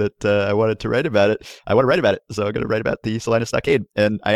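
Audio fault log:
1.30–4.36 s, time-stretched section: from 1.30 s to the end, the speech suddenly runs about 1.49 times faster while its pitch stays where it was, and it sounds hurried. Software likely squeezed this stretch to fit a shorter length, dropping short slices of audio to hold the pitch. A plain speed-up or wrong playback rate would raise the pitch along with the pace.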